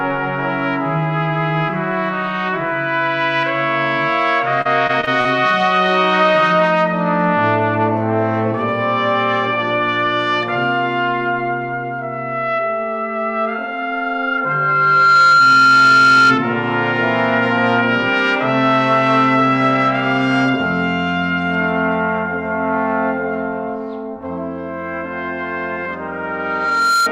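From 4.61 to 5.27 s there is repeated packet loss, heard as robotic sound. The audio breaks up into five short holes, the longest about 40 ms. Packets went missing or arrived late, one after another. Each hole was patched by stretching the sound just before it. About a fifth of this stretch is that patched fill. The result is choppy and mechanical, with bits of sound dropped out.

A loudspeaker feedback squeal starts at 13.47 s and lasts until 16.41 s. A tone at 1.4 kHz swells over about a second and a half. It ends up about 10 dB above the rest of the sound. The microphone was picking up its own loudspeaker. At that one frequency the loop gained more than it lost, so the tone kept growing. The same 1.4 kHz squeal returns at 26.07 s and runs to the end. This time it builds in about a second and stays lower, about 5 dB above the sound.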